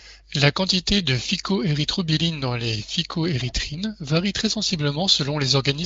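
Nothing goes wrong in this speech; it's passing through the AMR wideband (HD Voice) codec with its content stopping at about 7.6 kHz, with the codec running at around 23.05 kbit/s.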